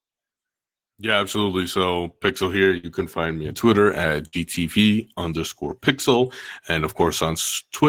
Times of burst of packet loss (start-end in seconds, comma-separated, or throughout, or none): 2.77-2.86, 4.27-4.36